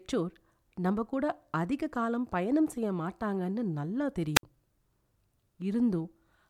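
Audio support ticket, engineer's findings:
Wireless microphone squelch dropout at 4.35–4.43 s in speech. Brief rise of hiss, then a hole of near silence lasting about 60 ms before the signal returns. Probable component: analogue FM radio link and receiver squelch. Mechanism: RF signal fades below the receiver threshold, noise surges, and squelch gates the output. Check antenna placement, line of sight, transmitter battery and squelch setting.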